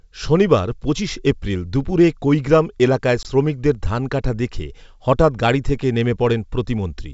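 A speech clip carried over G.722 wideband telephone coding, clear up to about 7 kHz, which fits the 64 kbit/s mode, has packet loss on an ADPCM call between 3.23 and 3.27 s. About 20 ms of audio, a couple of packets, drops to hard-edged silence. What separates this from a simple dropout is the recovery. The decoder's predictor and step size have lost track of the sender's, so the sound comes back briefly disturbed before settling.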